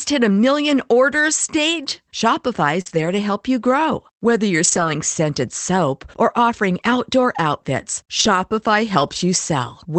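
At 2.81 to 2.88 s, about 40 ms of audio arrived too late for the decoder, and it covered the hole by extending the preceding sound before blending back. This short concealed packet loss is heard as a brief smear or wobble.

Overlapping it, from 2.86 to 3.08 s, just before "to help you grow", lost packets were rebuilt from error correction. The decoder played the lower-quality backup copies carried in later packets, so about 120 ms sound rougher and noisier with no gap. The same lost packet rebuilt from error correction recurs at 4.64 to 4.90 s (about 140 ms, just before "scented soap or offering"), at 8.20 to 8.38 s (about 100 ms, right after "or offering outdoor outfits"), and at 9.00 to 9.18 s (about 100 ms). Each is a short grainy patch in the Opus call audio, which is band-limited to 8 kHz.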